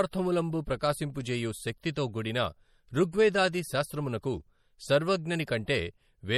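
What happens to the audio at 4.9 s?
At 4.9 s the speech carries watery, swirly smearing, likely MP3 compression running throughout, nearer a 48 kbps rate. Weak frequency lines flicker between frames, unlike steady hiss, with nothing above 20.9 kHz.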